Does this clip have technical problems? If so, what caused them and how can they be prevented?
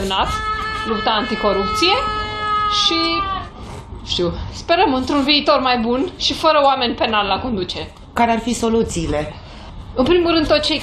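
No, nothing stood out on listening, so there is nothing here to trace to a cause or to prevent.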